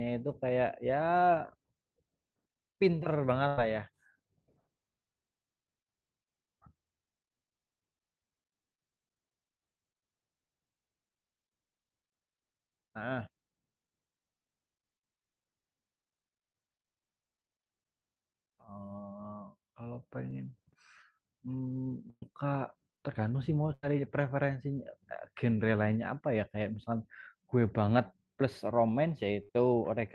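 Bursts of packet loss hit at 3.47 to 3.58 s, 22.10 to 22.23 s, 23.74 to 23.84 s and 29.43 to 29.53 s. Each time, the last sound is held and faded to a buzz or hiss. At 22.1 s it fades to silence. Speech then resumes, skipping 50 to 120 ms.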